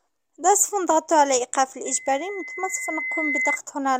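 At 1.85 s a loudspeaker feedback squeal begins: a single tone at 2 kHz rises out of the sound and swells for roughly a second and a half, until it is about as loud as everything else, then cuts off at 3.59 s. A microphone was picking up the loudspeaker it fed, and at that pitch the loop gain went above one. The steady growth from nothing is what separates it from an interfering tone, which would hold a fixed level.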